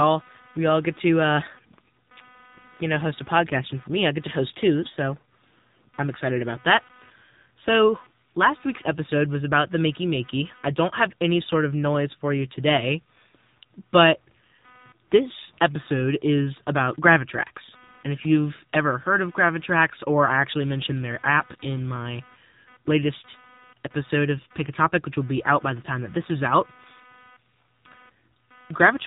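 Speech runs through an AMR narrowband mobile codec for the whole clip, and the audio path shares a ground with busy computer hardware. The codec's sparse pulse model leaves the voice plainly buzzy and synthetic, with nothing above 3.8 kHz, and the plain damage fits a low bitrate of around 7.4 kbps. The computer activity noise is a faint buzz pulsing roughly 300 times a second, about 30 dB below the speech. It follows the machine's processing load rather than the talking, so it never tracks the voice.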